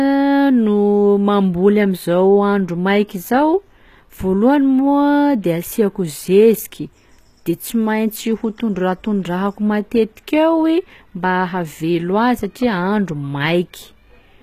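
Speech, with HE-AAC compression audible throughout: the treble is bright but synthetic and the s sounds turn gritty and lispy, likely from spectral band replication copying lower bands upward at a rate that points to about 20 kbps. Nothing is present above 14.9 kHz.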